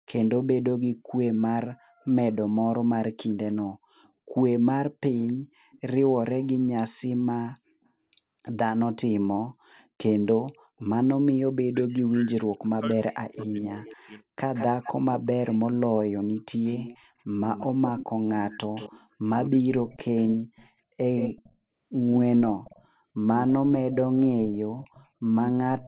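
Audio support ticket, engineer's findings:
Echo leak: faint delayed repeat of the speech trailing about 265 ms behind at 3.29–4.09 s (about 35 dB down), 5.17–5.80 s (about 25 dB down) and 9.79–9.87 s (about 40 dB down). Likely a speakerphone echo canceller on the far side leaving residual loudspeaker pickup in its send path.

Echo leak, later segment: delay shifts to 174 ms and the copy is much louder. Present at 14.54–15.58 s and 16.64–21.52 s (about 10 dB down), 22.64–22.87 s (about 25 dB down), and 23.93 s to the end (about 15 dB down). Likely the same canceller, with the echo delay changed.

Speech suppressed in double talk: the speech dips and breaks into pieces across 11.61–14.22 s while the other side talks. The deepest drop is around 40 dB, with about 2 s affected in total. Likely the echo canceller failed to separate the near talker from the loudspeaker echo and attenuated both. 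Audio stays band-limited to 4 kHz throughout, consistent with G.711 mu-law on the call path.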